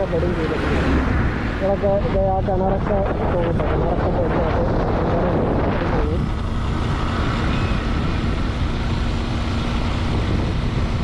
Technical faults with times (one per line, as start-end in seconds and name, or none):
2.46-4.46 adaptive stream at a lower bitrate